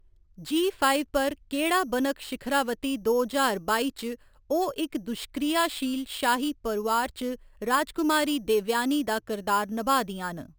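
The rate was raised by repeating each sample unfiltered, which fits a 12 kHz to 48 kHz conversion. This imaging from sample-and-hold upsampling mirrors the speech into 6 to 12 kHz, about 16 dB down, a metallic fizz tracking the speech throughout.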